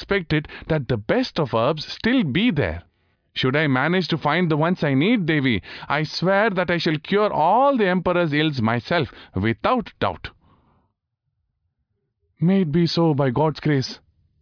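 No dropouts, clicks, distortion or other technical faults turn up anywhere in this speech recording.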